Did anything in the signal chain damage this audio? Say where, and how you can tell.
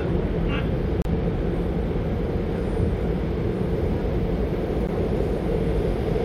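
Yes. The sound drops to dead silence for about 32 ms from 1.02 to 1.05 s, and again for about 13 ms at 4.87 s, then resumes. This is likely a Bluetooth stall: radio interference delayed packets, the headphones' buffer emptied, and playback paused until retransmissions arrived.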